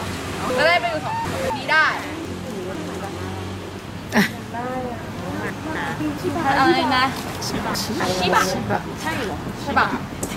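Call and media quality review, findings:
Chunks out of order at 0.5–1.5 s, 2.25–3.0 s, 5.5–6.0 s and 7.5–8.0 s: jumbled passages with hard joins. One 250 ms chunk is late by three, two, one and one chunk respectively, pointing at the jitter buffer or reassembly. Unlike packet loss, no audio is missing; it is only misplaced.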